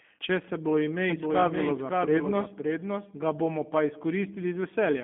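From the first moment to the end, the speech has been through the G.729 codec, most likely the G.729A variant, and the damage is plainly audible. The coder rebuilds each short frame from a vocal tract filter, a pitch predictor and a handful of pulses, which fits an 8 kbit/s stream. So the voice comes out intelligible but rough and slightly synthetic. The band sits roughly between 200 Hz and 3.5 kHz, with nothing above 3.8 kHz, so it sounds boxy and phone-like.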